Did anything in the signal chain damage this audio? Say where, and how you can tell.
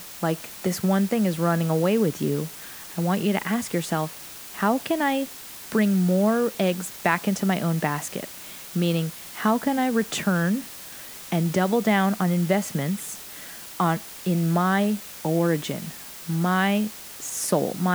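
Yes. A steady, even hiss sits under the speech for the whole clip, only about 15 dB below it, yet the speech stays clean. That points to sample-format conversion: low bit depth with dither, around 6 bits, where added dither turns rounding error into constant white noise.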